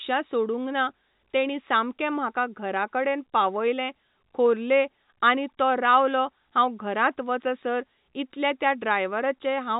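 No faults found in this speech; the band stops at 4 kHz, which fits a 64 kbps G.711 A-law telephone path.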